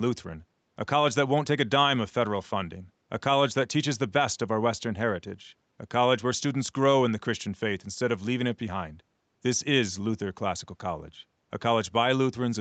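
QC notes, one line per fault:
Nothing stood out on listening to this speech, which carries the call path's usual limit of nothing above 8 kHz.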